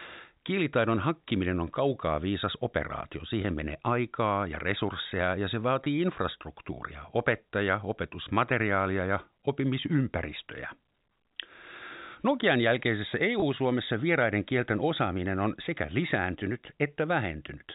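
Packet loss with pitch repetition occurs at 3.42 s, after "on kaukaa viisas operaatio"; at 5.84 s; at 13.4 s, before "vieraiden kielten osaaminen on"; and at 15.86 s, after "kielten osaaminen on sekä". Each dropout lasts about 20 ms, consistent with a single lost packet. The receiver fills it by repeating the last pitch period, which sounds like a brief buzzy hold over the G.711 telephone-band audio.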